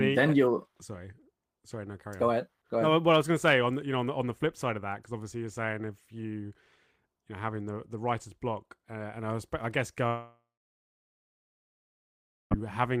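At 10.07 s the speech stops and the last sound is stretched into a buzz or hiss that fades over a few tenths of a second. About 2.1 s of silence follows until 12.52 s, when speech resumes with roughly 2.4 s lost. This is likely a long network dropout that the receiver papered over. On a spectrogram, smeared energy decays into a blank band. The waveform shows a tapering envelope, then a flat line.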